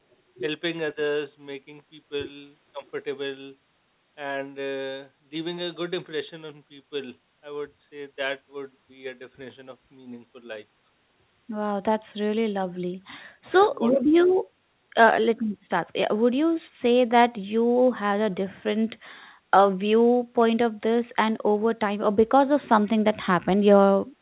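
Speech over a call, band-limited with nothing above 4 kHz, which fits a G.711 A-law path at 64 kbps. The voice dips by roughly 10 dB at 2.72–2.84 s and again at 13.49–13.74 s, likely speech suppressed in double talk as the echo canceller ducks everything while the far side talks. Right after, at 13.93–14.03 s, a faint delayed copy surfaces about 480 ms late and about 25 dB down, likely an echo leak from a loudspeaker end.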